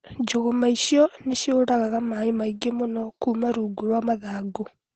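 From start to finish the speech carries Opus voice compression, and it's plainly audible. There's nothing above about 8.8 kHz, so the top end is gone and everything sounds a bit muffled. The codec is running its SILK mode in wideband, modelling the voice with linear prediction and only roughly coding the excitation, which fits a bitrate of around 12 kbps. That's what gives the voice its hoarse, slightly robotic edge.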